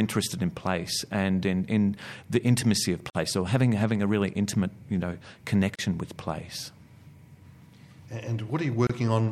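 Gaps at joins of encoded pieces at 3.10 s, 5.75 s and 8.87 s: untrimmed encoder delay and end padding leave silences of 49, 33 and 26 ms in the speech.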